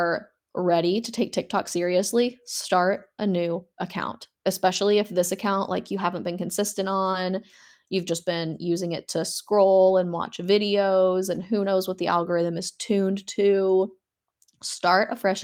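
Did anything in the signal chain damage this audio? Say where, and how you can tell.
Yes, the damage comes from the network stage of a packetised call using Opus.

Lost packets were rebuilt from error correction at 4.75 s, 7.13 s and 9.87 s, each a 20 ms patch, and across 11.35 to 11.45 s, where three packets totalling 60 ms were rebuilt. There is no gap at any of these. The speech turns briefly coarse and grainy instead. Each missing packet's successor carried a low-bitrate spare copy, and the decoder played that rougher version in its place.

A short concealed packet loss sits between 7.11 and 7.15 s, heard as a quick smear or wobble just before the rebuilt frame at 7.13 s. About 20 ms of audio never arrived in time. The decoder extrapolated roughly 16 ms from the preceding sound, carrying its pitch forward or filling it with shaped noise, and then crossfaded back into the real signal, which leaves that momentary blur.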